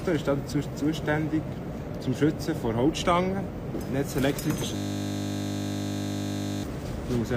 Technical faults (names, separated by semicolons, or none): system hang loop